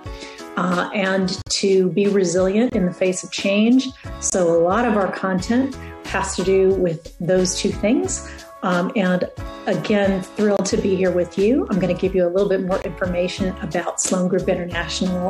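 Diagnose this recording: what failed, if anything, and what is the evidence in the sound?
The fault sits at the codec stage: corrupt frames were muted. Bits in the compressed stream were damaged, the decoder rejected the affected frames, and the player substituted silence. Abrupt dropouts start at 1.42 s (about 66 ms), 2.70 s (36 ms), 4.30 s (55 ms), 10.57 s (36 ms) and 12.82 s (36 ms). The repeated 36 ms length points to single frames, and the longer gaps fit two adjacent frames. Timing is preserved throughout. On a waveform each event is a flat, hard-edged silent run. A spectrogram shows clean vertical black slots across all frequencies.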